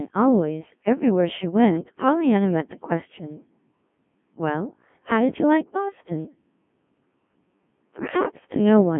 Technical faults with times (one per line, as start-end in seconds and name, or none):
0.00-9.00 Codec 2 vocoder